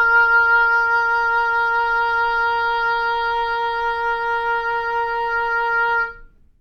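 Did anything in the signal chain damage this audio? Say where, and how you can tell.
No, nothing in the chain audibly damaged these sounds, and there is no stage to point to.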